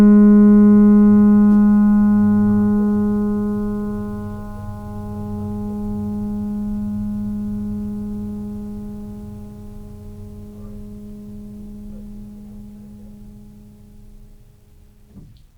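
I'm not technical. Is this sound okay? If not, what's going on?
Yes, this piece of music sounds just fine, with nothing wrong that I can hear anywhere in it.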